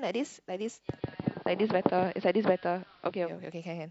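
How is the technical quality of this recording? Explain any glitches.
The recording has one fault: a digital radio blending to analogue episode from 0.90 s to 3.34 s. The hybrid receiver lost its digital stream and cross-faded over 139 ms to the station's AM broadcast, then faded back. During that span the speech turns dull, reflecting AM's narrow audio bandwidth. Hiss rises to roughly 30 dB below the speech, and the level shifts by about 1 dB at each transition.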